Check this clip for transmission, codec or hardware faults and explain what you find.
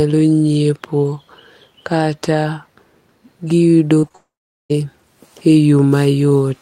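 Yes, there are transmission faults here: a cluster of brief concealed gaps in the speech around 4 s, running straight into a longer dropout.

Short concealed packet loss occurs at 3.99–4.05 s, 4.09–4.12 s and 4.12–4.16 s. Each sounds like a quick smear or wobble in the speech. The receiver lacked roughly 40, 20 and 20 ms of audio and papered over each hole by extending the preceding sound before blending back.

A long network dropout follows from 4.16 to 4.72 s. The last sound is carried on as a fading buzz or hiss, then about 420 ms of near-silence. The likely cause is that roughly 540 ms of speech never arrived, so what was said there is simply lost.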